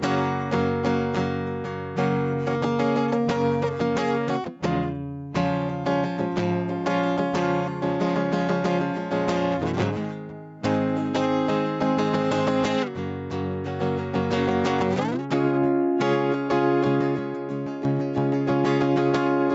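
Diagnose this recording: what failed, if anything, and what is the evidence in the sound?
Gain pumping runs through the whole music clip. The level breathes, a swing of around 5 dB. Loud and soft parts sit too close in level, so the music sounds squashed. The fault sits at the input gain and dynamics stage. The likely cause is mic gain set far too high, with a fast limiter clamping every peak. The top end stops near 8 kHz, from the call path.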